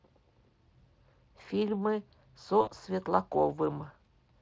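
At 0.79 s a brief VoIP packet loss concealed by the speech codec occurs: about 20 ms went missing, and the Speex decoder filled it by repeating its last pitch and filter, giving a short stretched sound that fades, with the lost span ending at 0.82 s. A longer gap follows from 2.61 to 2.72 s, about 60 ms, heard as a stretched sound that fades. On a spectrogram the harmonics stretch flat and dim; the waveform shows repeated cycles shrinking in amplitude.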